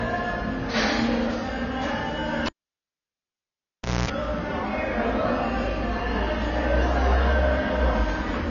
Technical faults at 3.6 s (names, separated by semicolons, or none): AAC compression; cable pulled and plugged in